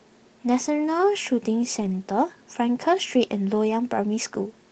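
A brief rough, noisy patch in this speech from 1.81 to 1.95 s is a lost packet rebuilt from error correction: about 80 ms, consistent with four 20 ms packets, was decoded from lower-quality backup copies through the Opus call path.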